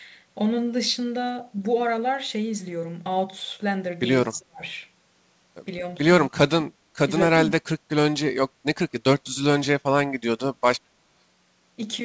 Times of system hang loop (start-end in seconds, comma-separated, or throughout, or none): none